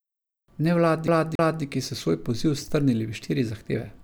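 A speech clip with a CD stuck on one turn from 1.08 to 1.63 s: a 0.28 s slice plays twice, with a brief mute at each jump, before "so svoj poziv strnili" continues. That short mute at each jump and the even 0.28 s repeat set it apart from a seamless buffer loop.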